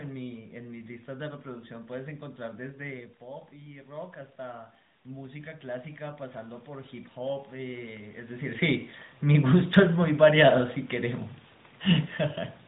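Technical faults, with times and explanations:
4.75 s and 9.74 s, audio missing between chunks: at each point the speech skips forward by only a few milliseconds, with the two sides joined directly and no silence between them. The even 5 s spacing points to chunked recording or processing that likely drops a sliver of audio at each chunk boundary. On a waveform, each point shows as an abrupt splice where the wave jumps discontinuously. On a spectrogram, it appears as a thin vertical seam cutting through the speech harmonics.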